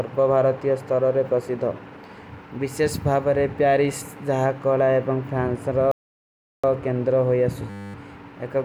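At 5.91 s the speech cuts out and stays silent until 6.64 s, a gap of about 0.72 s. That is a playback stall, most likely the player running out of data or its thread being blocked.

From 7.70 s to 7.94 s a system hang loop occurs: the same 10 ms slice repeats 24 times, giving a steady 100 Hz buzz in place of the speech. The hardware kept replaying its ring buffer while the system froze, and roughly 0.2 s of audio is lost.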